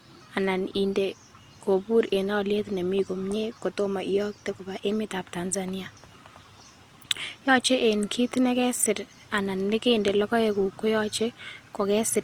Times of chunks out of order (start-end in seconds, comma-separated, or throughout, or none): none